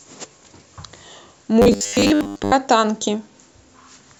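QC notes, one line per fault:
1.62–2.52 s: robotic sound from repeated short buffers. The speech collapses into a stiff metallic buzz pitched at 100 Hz that loosely follows the words. This is likely a 10 ms slice being replayed while fresh audio arrives late, so most of the real sound is skipped.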